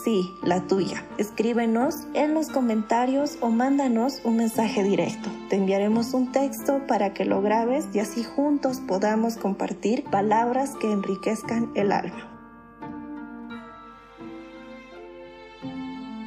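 Mains hum runs from start to finish: a steady 50 Hz tone with some low harmonics sits roughly 35 dB beneath the sound, quiet but constant. A ground loop or nearby transformer has let the power line leak into the signal path.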